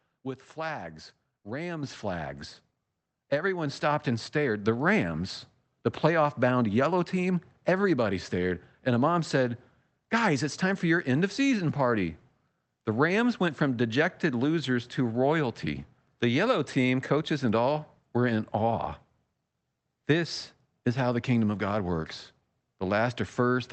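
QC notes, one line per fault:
1.83 s, 3.66 s: microphone volume stepped up, about 6 dB then about 3 dB, the second just before "stopped and stared". Input gain jumps, so speech and background rise together, showing as abrupt steps in the waveform envelope.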